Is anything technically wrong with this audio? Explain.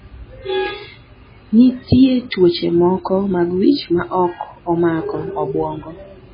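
Yes. Throughout the speech there is heavy damage of the kind MP3 compression leaves, likely from a very low bitrate around 16 kbps. Nothing survives above 5 kHz, and starved frequency lines switch on and off between frames, giving a watery, swirling texture and smeared consonants. A plain low-pass filter would dull the sound without that swirl.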